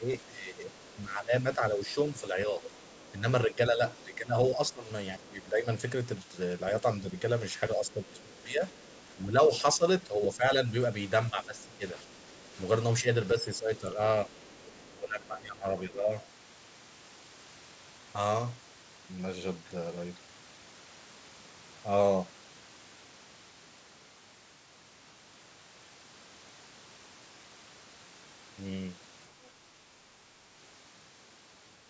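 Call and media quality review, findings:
Speech suppressed in double talk, 0.0–5.67 s, 6.82–13.98 s, 14.94–16.11 s. Likely echo canceller mistaking near-end talker for loudspeaker echo while both sides speak, so it attenuates everything. Near-end speech dips by about 10 dB in the first two spans and about 15 dB in the third, in pieces covering roughly 3 s, 3 s and 1 s.

Other side's voice leaking through, 1.91–3.96 s, 8.71–9.6 s, 13.78–14.92 s. Likely residual echo the canceller failed to remove from the mic path. A faint second voice sits under the talker, about 25, 35 and 30 dB below the speech. Overlapping the suppression windows. Band tops out near 8 kHz, consistent with call mic processing.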